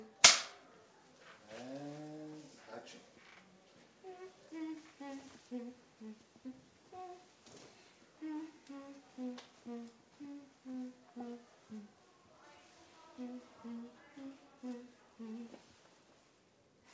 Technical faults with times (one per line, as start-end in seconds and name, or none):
none